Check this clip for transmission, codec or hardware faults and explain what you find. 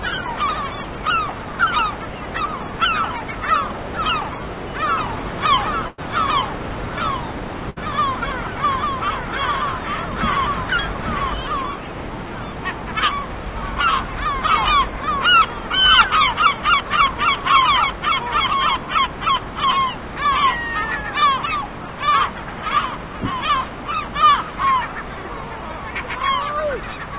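Two kinds of fault appear, a doubled audio track and two bursts of packet loss, all heard through a call path whose band stops at 4 kHz, as narrowband G.711 does.

From 4.98 s to 11.34 s a doubled audio track is present. A full-band second copy of the sound runs roughly one second behind and about 5 dB quieter, likely from a second, slower capture path mixing in. Unlike an echo or reverb, it has no decay or room colouring, and it starts and stops abruptly.

Packet loss bursts occur at 5.88 to 6.00 s, about 100 ms missing, and 7.70 to 7.78 s, 60 ms missing. The receiver stretches the last sound and fades it across each gap before the audio resumes later on. That faded continuation, not a hard silence or click, separates it from a plain dropout.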